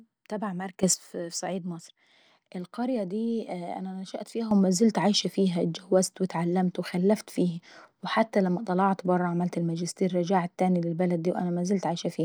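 At 0.83 s the level leaps up by about 12 dB and stays there until 0.94 s, then drops back. At 4.51 s it jumps again, this time by about 10 dB, and holds right through to the end. Both are sudden gain jumps: the speech and the background noise rise together in a single step, with no fade. That points to a gain setting that was likely applied instantly instead of being ramped in.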